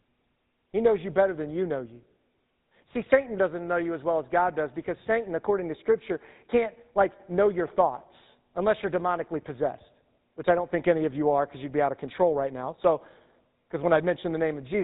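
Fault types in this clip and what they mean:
GSM full-rate codec: throughout, speech is rebuilt from a vocal-tract model excited by coarse, evenly spaced pulses, giving plainly audible buzzy, gravelly roughness consistent with 13 kbps GSM full rate. A spectrogram shows nothing above 4 kHz and grainy, smeared harmonics below.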